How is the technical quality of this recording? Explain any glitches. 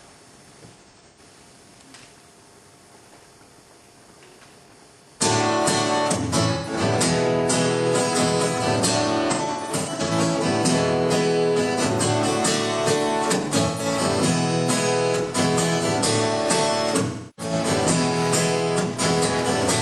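The recording has five short smeared, noisy patches at 0.73–1.19, 6.54–6.73, 9.31–10.11, 13.66–13.85 and 17.07–17.53 s. This is AAC frame loss with concealment: the decoder rebuilt missing frames from the last good spectrum. The stretches at 0.73 and 9.31 s are scattered dropouts, the longest run about a tenth of a second.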